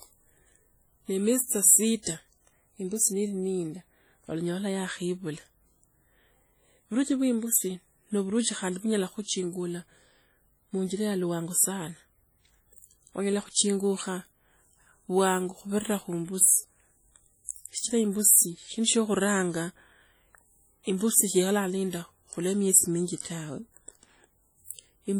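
From the first second to the end, the speech carries a ringing, washy quality, with a hiss that swells and fades along with the speech itself. The damage is heavy, even though content still reaches up to about 20.1 kHz. This is likely WMA compression, with a density of artefacts that fits a bitrate around 32 kbps. At that rate, long transform blocks smear quantisation noise across tens of milliseconds, and quieter spectral detail is dropped.

At 2.03 to 2.07 s, just after "miezi tsa", a brief hiss arrives ahead of a sharp onset, and the attack itself sounds blunted and smeared. This is pre-echo, spread over 39 ms. The onset sits late within a codec block. The noise allowance set for that loud moment is distributed over the entire block, so it also fills the quiet stretch before the attack, where nothing masks it.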